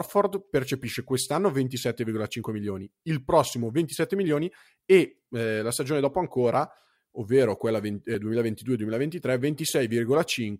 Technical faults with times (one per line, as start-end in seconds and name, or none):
8.14 compressed frames skipped